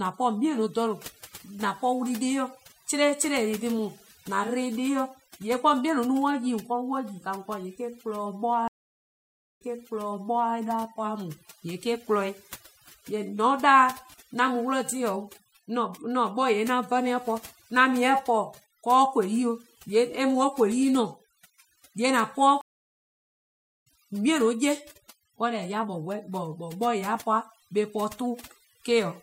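Overdone noise removal runs throughout: an over-aggressive denoiser suppresses bands near its noise estimate, leaving a lowered, twinkling background.

Stream reconnects occur at 8.68–10.54 s and 22.61–23.87 s. After a silence of 0.93 s, the first resumes about 0.94 s earlier, repeating audio. After 1.25 s of silence, the second resumes roughly a second later, skipping ahead.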